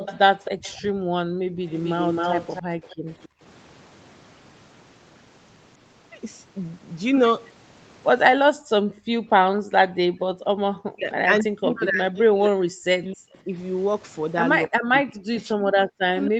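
From 0.0 to 0.76 s a faint second copy of the speech trails the talker by about 266 ms, roughly 15 dB below the voice. This is an echo leak, likely from a far-end loudspeaker whose echo canceller let some of the signal back through. It returns more strongly from 1.7 to 3.28 s, at the same 266 ms lag but now only about 5 dB down. The fixed, distinct delay is what separates it from room reverberation, which would smear the voice rather than repeat it.

Overlapping these, from 0.51 to 1.6 s, the background is gated by the echo canceller. The room tone sinks by up to about 21 dB for roughly 0.7 s in total, then returns as the canceller releases. The same happens from 2.96 to 3.42 s, dipping about 23 dB. From 8.55 to 10.61 s the drop is much deeper, about 40 dB, for roughly 1.5 s. Only the ambient bed vanishes, leaving sudden dead air rather than a weaker voice.

From 10.89 to 13.54 s the talker's own voice is pulled down in pieces, roughly 40 dB at worst, over about 2 s in total. 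This is speech suppressed in double talk, likely because both sides spoke at once and the canceller could not separate the talker from the returning echo. The same cutting recurs from 14.66 s to the end. Unlike the gating, it is the speech that breaks up here, not just the room behind it.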